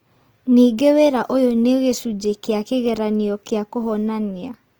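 Opus compression is audible for the whole speech clip. The sound is rough and grainy, with a noisy texture. Nothing is lost at the top, and content reaches 20.2 kHz. The likely cause is Opus music mode filling starved bands with noise, which fits a bitrate near 24 kbps.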